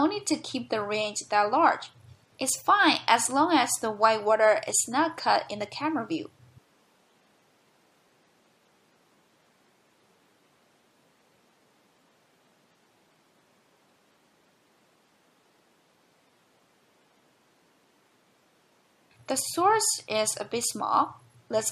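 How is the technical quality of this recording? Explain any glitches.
No audible glitches anywhere in the recording, so there is nothing to explain.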